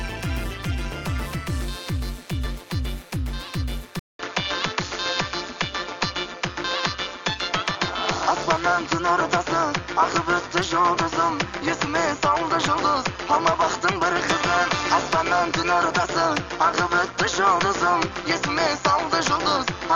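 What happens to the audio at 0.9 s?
At 0.9 s, as throughout the clip, overlap-add ripple is present. Frames rejoin with uneven gain, so the level pulses by about 11 dB around 200 times a second. It sounds like a metallic buzz with extra tones around each note.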